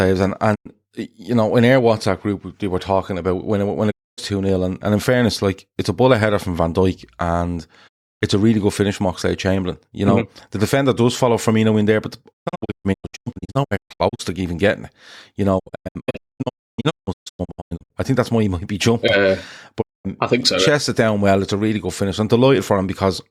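Digital broadcast dropout at 0.54, 3.90, 7.87, 12.32 to 14.21, 15.58 to 17.92 and 19.80 s: the receiver lost valid frames and muted, fading in about 20 ms. Single gaps last 0.1 to 0.32 s. The two longer stretches break into scattered holes up to 0.29 s. The missing speech is simply gone.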